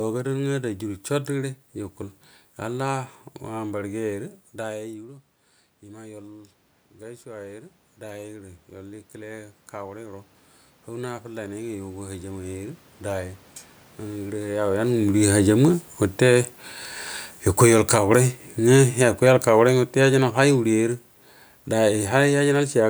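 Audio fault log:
14.66–22.74 s, automatic gain falling: just after the talker moves at roughly 14.5 s, the automatic gain control judges the input too loud and lowers its gain by about 11 dB over the remaining eight seconds. Because the cut is applied to the whole signal, the voice and the room noise beneath it sink together. That shared fade is what marks it as a level-control action rather than the talker moving away.
17.85–18.48 s, automatic gain rising: partway through the longer fall, the gain control briefly reverses, judging the input too quiet and raising its gain by about 5 dB over roughly 0.6 s. Voice and background swell together in this short window, producing a lift in level and room noise. The sound then resumes its downward drift as the control goes back to reducing gain toward the end of the clip.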